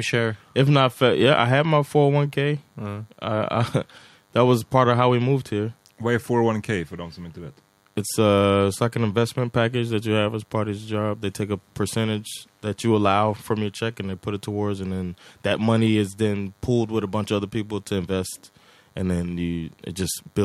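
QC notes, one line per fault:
Throughout: DECT cordless phone buzz. A steady, thin buzz sits under the speech for the whole clip, well below it at roughly 40 dB down. Its 100 Hz fundamental matches a radio burst every 10 ms from a nearby DECT handset or base. The audio circuit rectifies each burst into a sharp pulse, so the buzz carries a dense series of harmonics rather than a clean hum.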